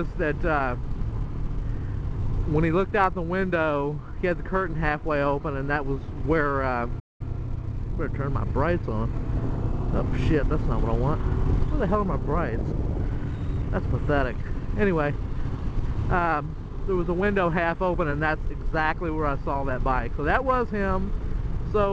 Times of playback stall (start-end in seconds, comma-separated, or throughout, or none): 6.99-7.21